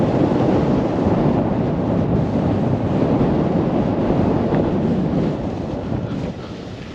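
No technical faults can be heard anywhere here.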